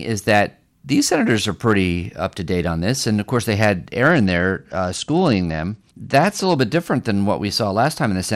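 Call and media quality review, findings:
Bluetooth SBC bit pool drop, 4.07 to 6.56 s, starting after "of course they had" and recovered by "bit different than". Treble in the speech dulls and gritty noise rises. Component: Bluetooth link under congestion. The encoder starves the top sub-bands and coarsely quantises the rest, consistent with a bit pool falling from about 28 to 11, near 90 kbps.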